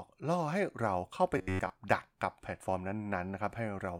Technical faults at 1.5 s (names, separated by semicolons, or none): robotic sound from repeated short buffers